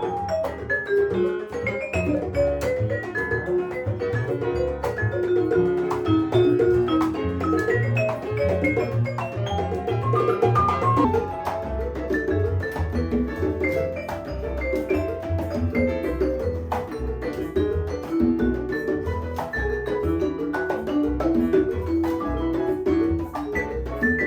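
From the start to about 11.05 s, the audio runs hurried and raised in pitch, about three semitones high, before dropping to its natural speed and register for the rest of the clip. This is a section at the wrong speed: playback there is 1.22 times too fast, so timing and pitch shift together. The likely cause is that this stretch was played or edited against the wrong clock rate.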